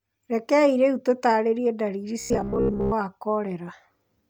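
Right after "rĩu tũtaarĩrie ndariri", from 2.20 to 2.93 s, there's robotic sound from repeated short buffers, a rigid 66.8 Hz buzz, likely from looping roughly 15 ms chunks for most of that stretch.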